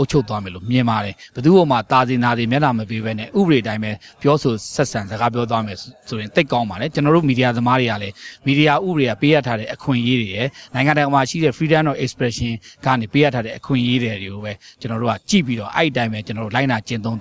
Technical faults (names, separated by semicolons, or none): none